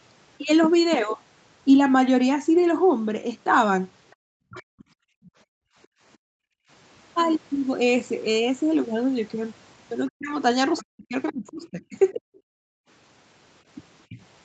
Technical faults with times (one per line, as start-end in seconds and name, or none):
4.11-5.87 other side's voice leaking through
4.15-6.69 background gated by the echo canceller
4.49-4.84 speech suppressed in double talk
10.08-12.40 other side's voice leaking through
10.10-12.21 speech suppressed in double talk
12.49-12.88 background gated by the echo canceller
14.09-14.17 speech suppressed in double talk